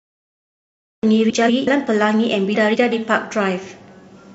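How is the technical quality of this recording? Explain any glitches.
The technical quality is compromised by two kinds of fault: a cut-off start and two short passages with frames out of order.

The cut-off start runs from 0.0 to 1.03 s. The file holds digital silence until speech begins abruptly at 1.03 s, partway through a sound. Recording or streaming started late, so there is no natural attack or fade-in.

The frames out of order occur at 1.29 to 1.68 s and again at 2.55 to 2.93 s. In each, two adjacent blocks of about 186 ms, which fits runs of four frames, were decoded in swapped order. The stretch plays back-half-first, producing a garbled flutter, though no time is lost.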